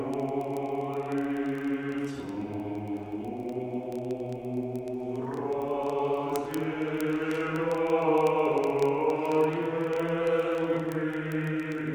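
Word clock ticks run through nearly the whole clip, from 0.1 s to 11.9 s, coming about every 30 ms, so they blur into a rattle. The receiving device wasn't locked to the sender's clock. They drift apart by roughly 700 ppm, slipping one sample hundreds of times.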